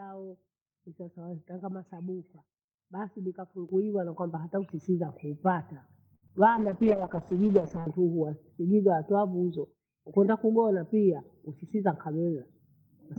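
Speech whose level jumps twice: at 3.69 s the voice and the background noise both get louder at once, by about 8 dB, and at 4.71 s they rise together again by about 4 dB. Because the background rises along with the voice, this is a microphone volume stepped up. The call software judged the input too quiet and raised the device's capture gain in two abrupt steps instead of adjusting gradually. Just after 6.15 s a sound hangs on unnaturally until 6.24 s, held with a faint buzzy sustain before the speech carries on without a gap. This is a short stall from a late packet. A packet arrived late, the jitter buffer ran dry, and the receiver stretched the last sound by 66 ms to cover the wait. Nothing was lost, but the playback now runs 66 ms later than before. Immediately afterwards, from 6.28 to 6.31 s, there is a tiny smear where the sound briefly blurs. This is short concealed packet loss. 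About 20 ms of audio never reached the decoder in time, so the receiver extrapolated from what came before and blended back into the real signal. From 6.57 to 7.94 s the voice turns rough, watery and dull, losing its crispness for about 1.3 s before clearing. That is a call bitrate drop. The bandwidth estimate fell and the encoder went from 32 kbps down to 9 kbps. At that rate Opus quantises coarsely and trims the high frequencies, which is what produces the muffled, gargly quality. From 11.12 to 12.44 s the speech sounds slightly hurried, about 5 percent faster, while the pitch stays the same. This is a jitter buffer speed-up. The buffer was holding more audio than it wanted, so the receiver repeatedly cut out tiny pitch-period-sized slices, removing roughly 70 ms in total to shrink the delay, and that quickens the pace.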